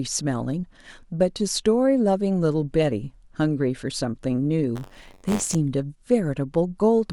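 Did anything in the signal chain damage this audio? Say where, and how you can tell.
Yes: buffer tearing from about 4.75 to 5.55 s, at the driver/buffer stage. A robotic rattle near 94 Hz, which fits a 512-sample buffer, rides on the speech because a small slice of each period repeats audio from roughly 30 ms earlier, with hard joins.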